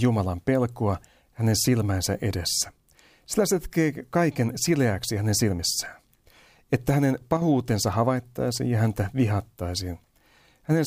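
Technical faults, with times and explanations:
7.37–7.42 s, one channel drops out: for about 50 ms the speech dips abruptly by about 6 dB, then recovers just before "havaittaisiin ja häntä". The likely cause is one stereo channel briefly going silent. Once summed to mono, the sound shared by both channels loses half its amplitude.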